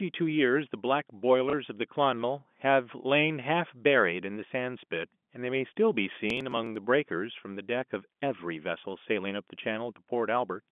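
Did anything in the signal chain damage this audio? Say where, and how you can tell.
Yes. Packet loss with last packet repeated, at 1.50 to 1.53 s (network stage): about 30 ms of speech is replaced by a repeat of the previous audio. With only one packet repeated, it is heard as a small blip.

Processor overload crackle, from 6.30 to 6.76 s (driver or buffer stage): a gritty burst of tearing. Around ten short buffers of roughly 3 ms each were skipped, leaving hard-edged gaps. The crackle stops once the load passes.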